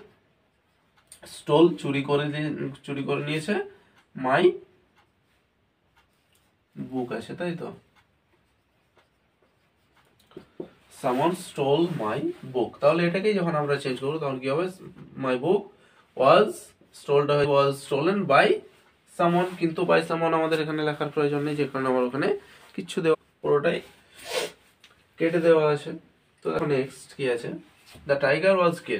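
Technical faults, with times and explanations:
17.44–17.46 s, 23.13–23.15 s and 26.59 s, damaged data in a compressed stream: three brief chirps or blips break through the sound, each lasting only about 14 to 22 ms. At these points part of the compressed stream was wrong, with bytes lost, zeroed or overwritten. The decoder misreads or rejects those frames and loses sync while it searches for the next valid frame header, which is why each glitch is such a short burst.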